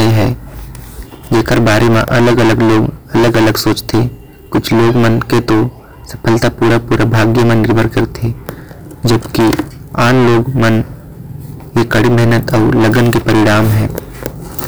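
Speech runs through heavy hard clipping from start to finish. The signal is driven about 24 dB past what the stage can pass, so nearly a third of the samples hit the ceiling and are sliced flat. Every loud syllable turns into harsh fuzz. On a waveform the peaks sit as a solid block cut flat at one level. A spectrogram shows dense harmonic smearing reaching far up toward the top of the spectrum.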